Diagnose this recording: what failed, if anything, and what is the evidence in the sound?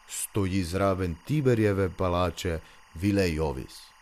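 Timecode bleed runs throughout the speech, a steady chirping warble near 1 and 2 kHz sitting roughly 30 dB below the voice. This points to analogue wiring: linear timecode at 23.976 frames per second is leaking from a neighbouring track or cable into the audio path.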